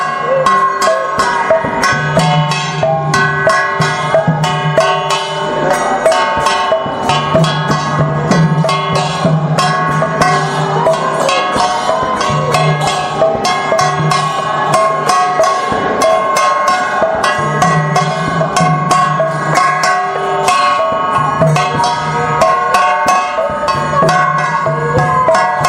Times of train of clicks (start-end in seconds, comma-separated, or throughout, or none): none